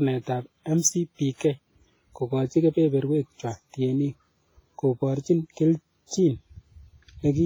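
Throughout the speech there is heavy ringing, washy smearing and hiss that breathes with the signal, likely WMA compression at a low bitrate such as 24 kbps. From 6.06 to 6.11 s, pre-echo: block-wide quantisation noise spreads about 46 ms ahead of an attack, heard as hiss before a softened onset.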